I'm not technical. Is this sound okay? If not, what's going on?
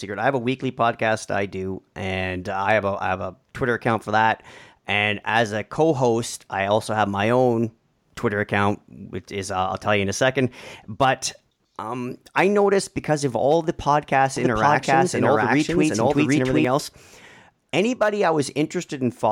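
No, there's a problem from about 14.4 to 16.6 seconds: a doubled audio track. The speech plays twice at once, with a second copy trailing roughly seven-tenths of a second behind and just as loud as the first, so it sounds like someone talking over themselves. It's clean, with no echo or room sound, and it switches on and off suddenly. The likely cause is the same audio getting captured twice, once through a slower route.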